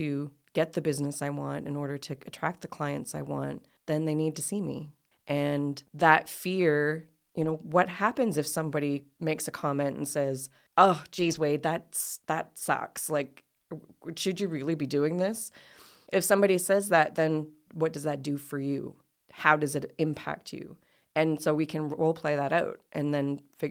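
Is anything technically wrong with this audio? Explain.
Yes. At 7.41 to 7.55 s, after "that fear", and 11.19 to 11.41 s, before "that's that sucks", lost packets were rebuilt from error correction: low-bitrate redundant copies fill the gaps, sounding briefly rough and noisy.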